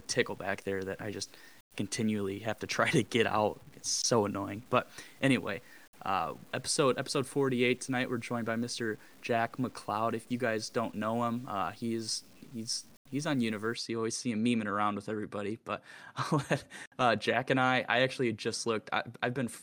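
A speech clip whose first 13.74 seconds, from 0 s to 13.74 s, carry low bit depth without dither, likely from samples being truncated to a coarse word length with no dither added, which points to roughly 8 bits. Because the rounding error tracks the signal, the quiet parts of the speech turn gritty and grainy, and the faintest moments either drop to silence or sputter between two levels. The distortion sits only around 30 dB below the signal.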